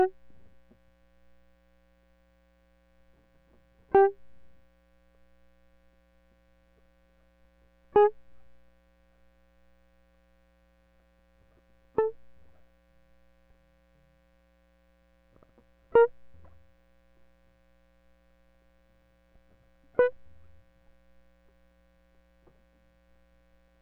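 Nothing in this music clip stands out as a technical fault; it just runs along without any trouble worth pointing to.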